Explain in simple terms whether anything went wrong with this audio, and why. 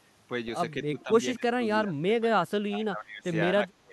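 The talker's speech keeps sinking and breaking up. Around 0.9 to 1.1 s it dips briefly, then from 1.35 to 3.26 s it is pushed down hard and drops out in pieces for most of that stretch, and again from 3.53 s to the end. This pattern is likely speech suppressed in double talk: both sides spoke at once, and the echo canceller, unable to tell this voice from the returning loudspeaker echo, turned everything down.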